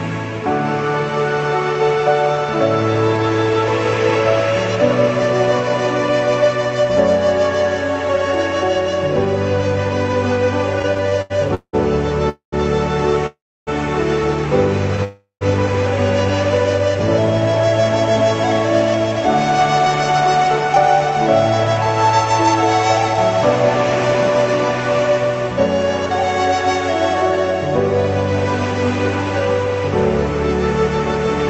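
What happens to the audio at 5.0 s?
Nothing goes wrong at 5.0 s: the audio carries on intact, with only the ordinary character of the call path, whose coding limits the high end to about 8 kHz.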